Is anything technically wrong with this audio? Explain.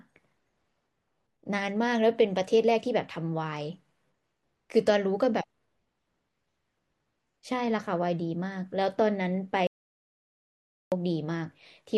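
Yes. From 9.67 to 10.92 s the speech cuts to silence for about 1.25 s, an audio dropout to silence, likely from lost input while recording continued.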